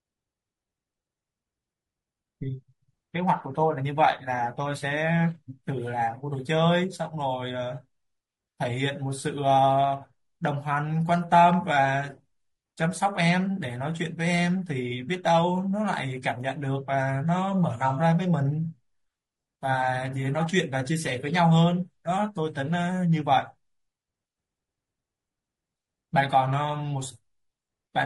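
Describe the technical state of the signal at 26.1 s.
Low-delay AAC compression is present at 26.1 s, as it is across the whole clip. The speech sounds rough and grainy, with noise filling the gaps between harmonics and a dulled, synthetic-sounding top band. This is likely AAC-ELD coding, whose short frames resolve pitch harmonics poorly, and the plainly audible damage fits a bitrate of around 32 kbps.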